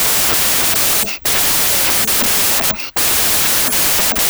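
A wrong sample width affects the whole clip. The sound fits 16-bit speech read as packed 24-bit samples, so most values join bytes from neighbouring samples. Loud noise buries the speech, which plays 1.5 times too fast and higher in pitch.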